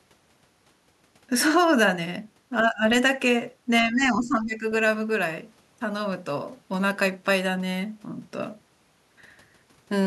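Around 2.63 to 2.84 s the speech level sags briefly, by roughly 10 dB, then recovers. A longer, deeper dip follows from 3.82 to 4.64 s, closer to 15 dB down, with the talker turned down for most of that stretch. That's speech suppressed in double talk. The likely cause is the echo canceller hearing both ends at once, failing to tell this talker from loudspeaker echo, and squashing everything.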